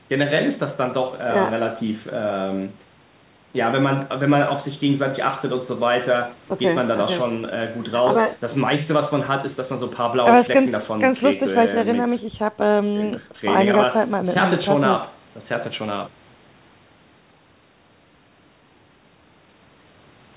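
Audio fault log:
No faults logged; the speech is band-limited with nothing above 4 kHz, which fits a narrowband call path such as G.711 mu-law at 64 kbps.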